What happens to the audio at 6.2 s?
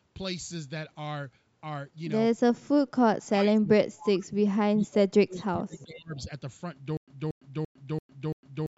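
Right at 6.2 s, a speech suppressed in double talk episode is ending. From 3.9 to 6.19 s the sound dips deeply, about two seconds affected in all. The likely cause is an echo canceller unable to separate its own talker from loudspeaker echo while both sides spoke, so it turned everything down. The fact that the level drops away marks it as gating, not a codec or bandwidth problem.

Overlapping this, from 6.16 to 6.22 s, there is a brief echo leak: a faint copy of earlier sound arriving 394 ms late, very low against the speech. It is likely residual loudspeaker pickup that the loudspeaker side's canceller failed to remove. The long, fixed delay separates it from room reverberation, which would trail directly behind the sound rather than returning as a distinct scrap.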